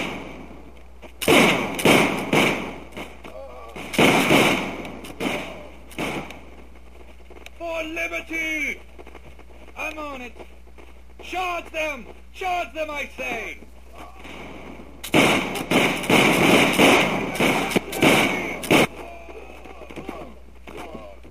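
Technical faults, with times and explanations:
Throughout, crude rate conversion: samples are repeated rather than filtered, which fits a 44.1 kHz to 48 kHz change, leaving an inharmonic fizz roughly 25 dB under loud, bright passages. A spectrogram shows faint mirrored tones; the waveform shows small stair-steps.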